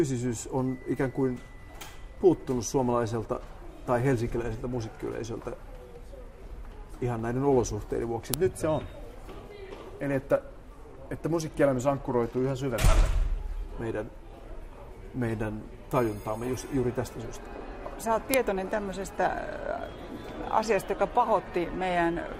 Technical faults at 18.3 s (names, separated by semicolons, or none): file header played as audio